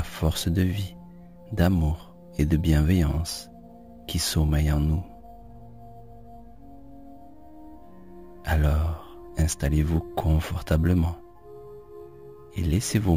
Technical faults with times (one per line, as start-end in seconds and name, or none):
0.00-13.17 imaging from sample-and-hold upsampling